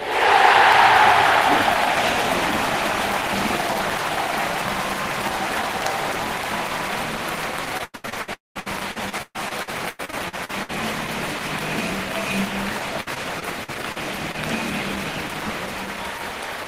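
From 7.77 to 10.71 s, repeated packet loss struck the stream: 21 gaps, the longest 126 ms, with about 0.9 s of audio missing and patched by extending the previous sound. About a third of that stretch is concealment, so the sound turns choppy and robotic, with pieces dropped out.

Inside that stretch, from 8.34 to 8.57 s, the audio briefly carries on and then falls silent for about 170 ms, likely a long network dropout in which roughly 220 ms never arrived. It resumes with that portion gone.

From 13.01 to 14.36 s, repeated packet loss returns with 6 gaps, the longest 57 ms and about 0.2 s missing in total. Concealment fills 14% of this span, so the same robotic choppiness comes back in shorter bursts.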